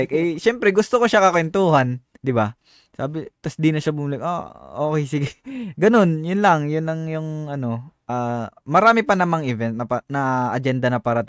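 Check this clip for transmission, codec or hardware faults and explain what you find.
No transmission, codec or hardware faults.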